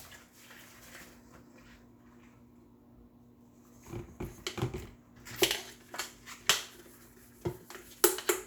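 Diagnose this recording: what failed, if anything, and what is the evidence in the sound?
Nothing failed in this recording, and the sound offers no evidence of a fault at any stage.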